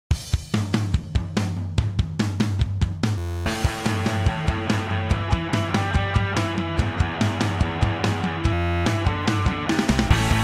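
The system froze twice while the hardware replayed one 11.61 ms buffer, consistent with 512 samples. This system hang loop produces an 86.1 Hz buzz at 3.18–3.46 s and 8.53–8.86 s, replacing about a third of a second of audio each time.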